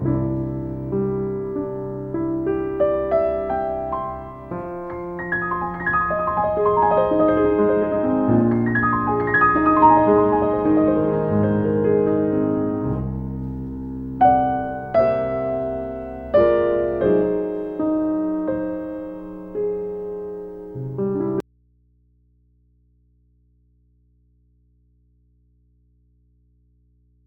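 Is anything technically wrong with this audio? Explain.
Yes, at 21.40 s there's an audio dropout to a faint residue: the sound cuts off abruptly and stays gone to the end, leaving only mains hum roughly 40 dB down. That's likely a lost signal feeding a path that stayed live, so the open input keeps humming.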